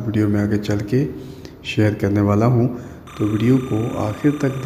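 From 3.07 s to the end, timecode bleed appears: linear timecode at 29.97 frames per second leaking in from an adjacent track or cable. Its square wave flips between roughly 1 and 2 kHz, giving a steady chirping warble about 20 dB below the programme.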